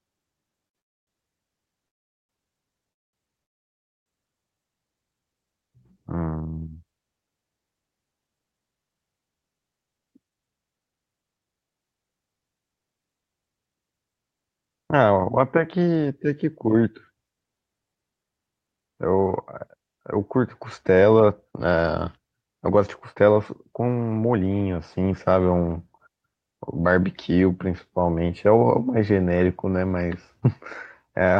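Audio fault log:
0.67–0.77 s, short stall from a late packet: a sound is held about 72 ms too long with a slight buzz or dip, then the speech carries on from exactly where it paused, with nothing lost. The jitter buffer ran dry for a moment because one packet arrived late, so the receiver stretched the last sound to bridge the wait. Unlike the freezes that follow, the hold is brief and never fades into silence.
0.79–1.09 s, 1.87–2.31 s, 2.91–3.15 s, 3.43–4.08 s, call audio freeze: four stoppages in quick succession, lasting roughly 0.3, 0.42, 0.22 and 0.63 s. In each, the last sound is briefly continued, then drops to silence for almost the whole gap, about 0.22 to 0.62 s. The speech then resumes mid-flow with nothing skipped, so each gap only adds delay. The likely cause is packets held up in transit while the jitter buffer sat empty. What separates these from the stall is that length and the fade to silence.
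18.31–24.51 s, jitter buffer speed-up: for about 6 s the speech runs at around 107% of its normal rate while the pitch stays put, so it sounds hurried rather than higher. The receiver was holding more buffered audio than it wanted, and trimmed short pitch-period slices many times in a row. In total, roughly half a second was removed. Unlike the freezes, no gap is heard. The delay is taken away, not added.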